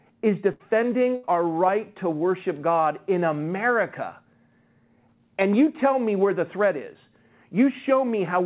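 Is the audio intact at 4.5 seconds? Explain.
Yes, the speech at 4.5 seconds is intact, with no dropout, glitch or distortion there, only the narrow band of a G.711 call path that carries nothing above 4 kHz.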